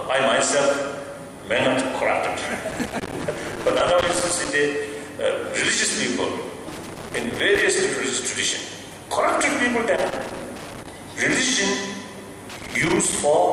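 At 2.69 to 4.49 s, 6.72 to 7.62 s, 9.96 to 10.89 s and 12.50 to 13.21 s, loose connector crackle breaks in as irregular scratchy bursts. A worn or dirty contact is intermittently opening and closing, chopping the signal. On the waveform each burst shows jagged dropouts and sharp spikes. On the spectrogram it appears as scattered broadband vertical streaks in those four stretches.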